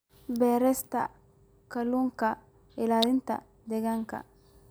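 At 3.03 s an electrical switching spike lands on the speech as a sharp snap near -10 dBFS, likely a nearby switch arcing into the line.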